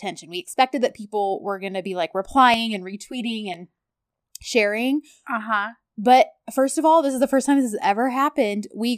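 After "were gonna be like", 2.54–3.54 s, a 5 ms channel delay causes comb filtering: hollow tone, spectrogram notches evenly spaced from about 100 Hz.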